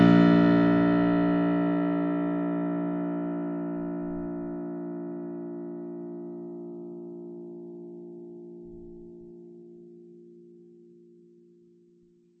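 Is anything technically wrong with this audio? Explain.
Yes. Throughout the music, treble stops dead near 8.1 kHz, and the sound is plainly watery and swirly. This is likely MP3 compression, consistent with a very low bitrate such as 32 kbps, cutting highs and toggling weak frequency lines between frames.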